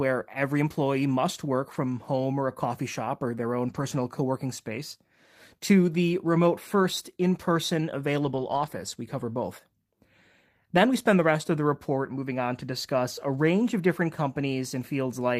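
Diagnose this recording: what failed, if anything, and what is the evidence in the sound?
Network packet loss, each a lost packet rebuilt from error correction, at 1.73–1.75 s, 3.69–3.83 s and 8.21–8.67 s. There are no gaps, but the sound turns rougher and noisier for 20, 80 and 240 ms, as the decoder played low-bitrate copies carried in later packets.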